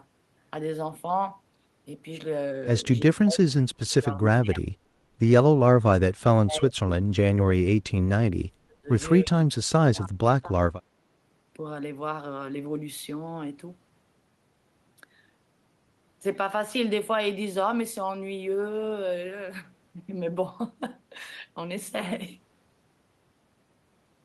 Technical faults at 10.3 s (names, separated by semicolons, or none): speech suppressed in double talk